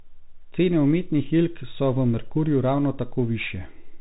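From start to finish the speech carries the sound of a Bluetooth CVSD headset codec, which fits a 64 kbps stream of one-bit up-or-down steps whose size adapts to the signal. Nothing above 3.8 kHz survives, so a spectrogram shows a flat ceiling with empty space above it. Loud, bright moments outrun the step size and distort, s sounds turn scratchy, and a granular hiss sits under everything, visible in the waveform as fine jagged texture.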